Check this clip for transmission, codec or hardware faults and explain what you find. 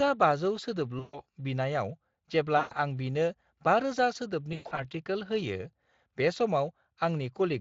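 There are three dropouts where lost audio has been patched over, a fault known as VoIP packet loss concealed by the speech codec. They occur at 0.99 to 1.21 s, 2.57 to 2.74 s and 4.53 to 4.84 s. The first two each lose about 140 ms. The third loses about 180 ms spread over 240 ms, with its longest gap about 120 ms. In each gap the decoder keeps repeating its last pitch and filter at falling gain, so the speech smears into a fading buzzy tone or coloured noise and stays weak or distorted briefly after packets resume. On a spectrogram, harmonics freeze into flat stripes that dim. The waveform shows repeating cycles shrinking in amplitude. The Speex coding underneath, at 23.8 kbps, adds only mild coloration.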